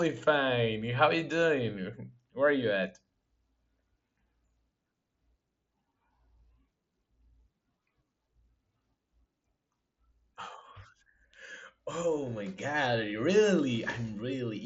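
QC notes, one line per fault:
No faults found in this speech clip. The Bluetooth mSBC headset codec path can be heard as a top end that stops at about 7.7 kHz, with a light graininess on the louder sounds.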